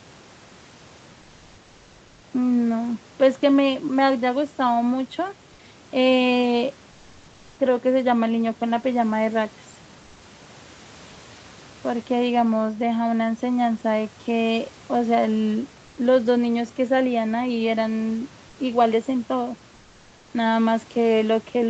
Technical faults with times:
15.85-15.97 comfort noise in place of the background

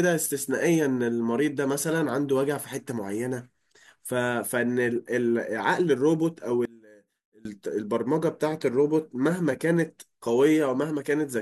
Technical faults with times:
6.65-7.45 one channel inverted

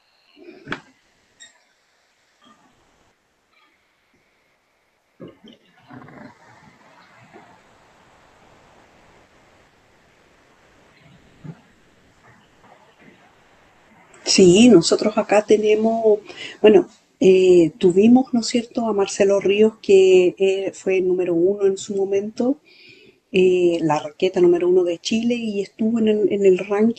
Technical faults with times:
0.00-0.27 comfort noise in place of the background
0.99-1.39 comfort noise in place of the background
1.71-2.41 comfort noise in place of the background
2.71-5.19 comfort noise in place of the background
7.59-11.43 comfort noise in place of the background
11.71-12.63 comfort noise in place of the background
13.29-13.89 comfort noise in place of the background
23.23-23.31 comfort noise in place of the background

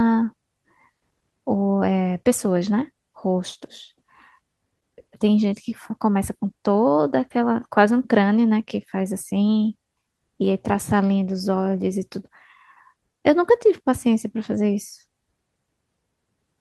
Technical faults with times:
none

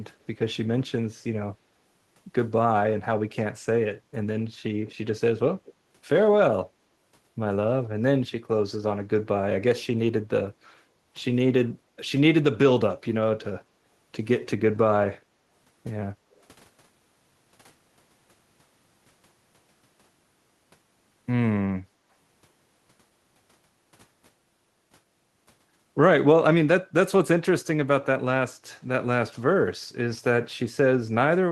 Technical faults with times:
4.87-4.94 echo leak
5.52-5.73 echo leak
11.76-12.02 background gated by the echo canceller
13.66-13.76 background gated by the echo canceller
15.20-15.31 background gated by the echo canceller
16.31-16.41 echo leak

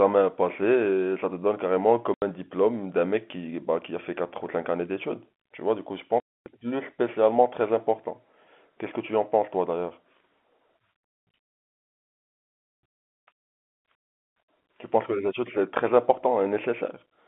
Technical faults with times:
2.14-2.22 packet loss filled with silence
6.20-6.46 packet loss filled with silence

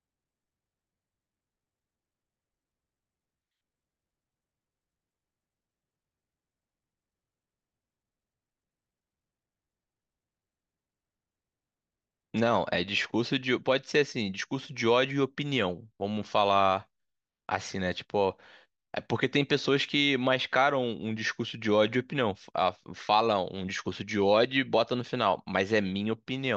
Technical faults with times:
none

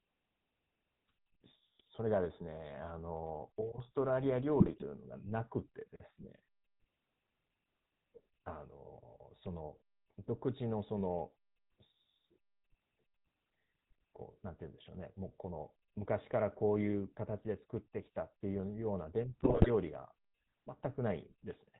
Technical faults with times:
0.00-21.80 GSM full-rate codec
1.79 GSM bit errors
4.60-4.83 GSM bit errors
19.40-19.70 GSM bit errors

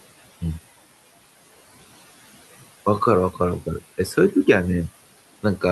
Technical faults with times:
0.00-5.72 noise suppressor artifacts

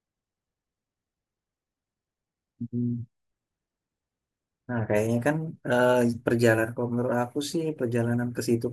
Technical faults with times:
none

